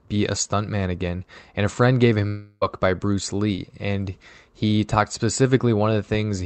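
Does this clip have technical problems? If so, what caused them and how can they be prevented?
Yes. Right after "a friend gave", from 2.27 to 2.63 s, the sound becomes a fading buzz or hiss for about a third of a second, then falls briefly silent. This is likely a long network dropout. The receiver stretched the last sound over the missing stretch. A more stable, less congested connection would prevent it.

From 3.55 to 3.59 s, just before "and he talked", a short concealed packet loss causes a brief smear. About 20 ms of audio failed to arrive in time. The decoder filled the gap by extending the preceding sound. Forward error correction or a larger jitter buffer would prevent it.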